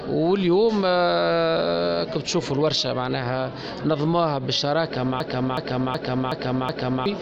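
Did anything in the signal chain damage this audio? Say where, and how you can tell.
Yes, at the driver and buffer stage. From 5.20 s to 7.06 s the same 371.52 ms slice of audio plays over and over, five times, at about 2.69 Hz. That's a system hang loop: the host or driver stalled, but the sound hardware kept reading the same ring buffer round and round. A slice that long gives a slow stutter rather than a buzz, fitting a 16384-sample buffer, and around two seconds of real audio never arrived.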